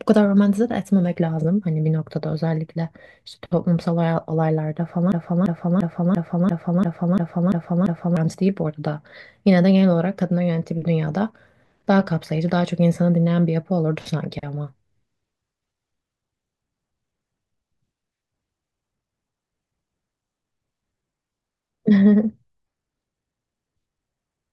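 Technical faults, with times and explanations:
5.12–8.17 s, broken-record loop: a 343 ms piece of speech repeats exactly, nine times back to back. Likely a stalled stream resending its last fragment. The intended speech is lost.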